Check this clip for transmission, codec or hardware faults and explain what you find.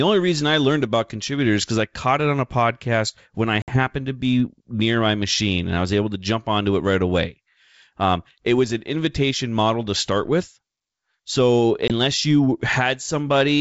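Two short dropouts are audible, both from packet loss on an ADPCM call.

Packet loss on an ADPCM call occurs at 3.62 to 3.79 s, where about 60 ms of audio is lost, likely a few packets. It happens again at 11.88 to 11.92 s, with about 20 ms gone, roughly one packet. Each hole is hard-edged silence. The decoder's predictor and step size then no longer match the sender's. So the speech comes back with brief slight distortion, and settles within tens of milliseconds. The wideband G.722 sound around the dropouts is clear.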